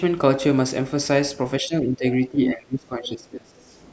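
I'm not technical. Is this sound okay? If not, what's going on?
No. From 1.61 to 3.75 seconds the voice keeps sinking and fading, which is speech suppressed in double talk, likely because both people spoke at once.

Around 2.46 to 2.53 seconds a brief scrap of the other side's voice leaks through, nearly as loud as the talker, likely loudspeaker sound the device failed to remove.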